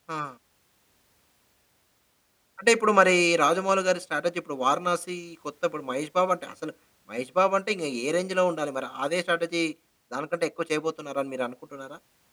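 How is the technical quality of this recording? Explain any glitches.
No glitches can be heard anywhere in the recording.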